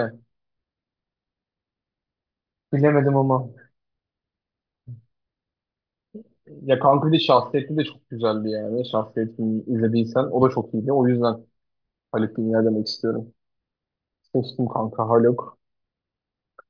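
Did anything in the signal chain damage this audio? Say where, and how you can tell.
No, nothing in the chain audibly damaged this speech; no stage from capture through playback leaves a mark that can be heard.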